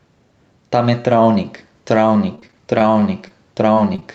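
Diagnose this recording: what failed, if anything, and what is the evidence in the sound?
Gain pumping runs through the whole clip. The level swings by around 5 dB. The likely cause is a fast limiter or automatic gain stage behind an over-driven microphone input. Unlike network faults, nothing is missing. The level just breathes.

Repeated packet loss (robotic sound) occupies 2.35 to 3.32 s, a network fault. Over this span several short holes, the longest about 22 ms, are bridged by extending the preceding waveform. Roughly 13% of the stretch is synthetic, so the speech turns choppy with pieces missing rather than merely level-modulated.

Short concealed packet loss appears as isolated events at 3.74 to 3.78 s, 3.96 to 4.00 s and 4.00 to 4.03 s, each about 20 ms of audio that arrived too late. The decoder continued the last sound and crossfaded back, leaving brief smears or wobbles. These are separate single events, not a sustained robotic run.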